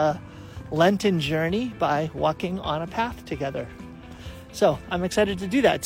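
No technical faults can be heard anywhere in this recording.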